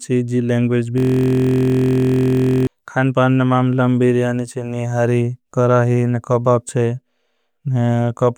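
From 0.98 to 2.67 s the speech gives way to a system hang loop. The machine or its audio driver stalled while the sound hardware kept replaying the same 23.2 ms stretch of its ring buffer, which fits a 1024-sample buffer, roughly 70 times in a row. Because the looped piece is so short, it is heard as a steady, pitched buzz at about 43 Hz rather than a rhythmic stutter. The cycles are identical and unbroken, which is what separates this from a packet-loss stutter or from gaps and clicks.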